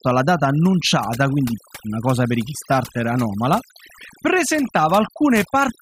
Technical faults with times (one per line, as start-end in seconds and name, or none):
0.00-5.81 overdone noise removal